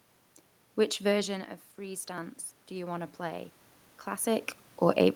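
Speech clip with automatic gain rising from 1.11 to 4.34 s: the talker drops about 14 dB around 1 s, so the gain creeps up about 7 dB, swelling room noise along with the voice.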